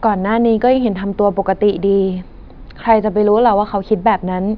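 A speech recording with nothing technically wrong to hear in it.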